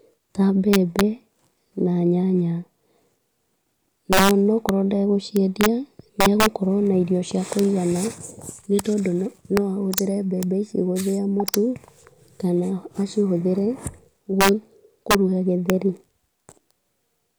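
Integer overflow runs through the whole speech clip: pushed about 11 dB too hot, a small fraction of peaks wrap to the opposite sign, giving harsh cracks on loud moments.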